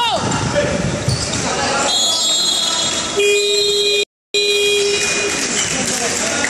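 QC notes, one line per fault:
4.03 to 4.34 s, playback stall. The sound cuts out mid-flow and leaves about 0.31 s of silence. It then carries on. The likely cause is the player running short of data or its thread being briefly blocked.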